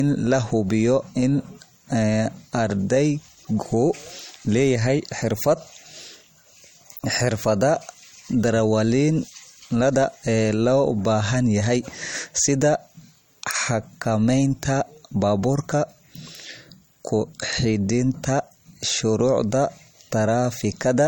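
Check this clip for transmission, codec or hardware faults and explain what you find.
There's one fault, and it runs through the whole recording: low-bitrate audio saved at a high bitrate. The speech has a hard ceiling with nothing above 17.4 kHz and keeps the smeared, swirly edges of heavy MP3 coding. That likely comes from a low-rate encode, around 48 kbit/s, later re-saved near 195 kbit/s, which can't restore what was lost.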